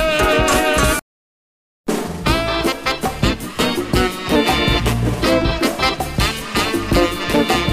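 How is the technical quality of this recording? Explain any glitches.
The recording has one clear glitch, a drift correction step from 3.53 to 4.36 s. The likely cause is clock-matching software that found its buffer drifting and corrected it by changing the playback rate in a single jump instead of gradually. For those 0.82 s the sound runs about 5.8% fast and its pitch rises by about 97 cents, close to a full semitone, before snapping back. Speed and pitch move together, so the passage sounds abruptly detuned and hurried.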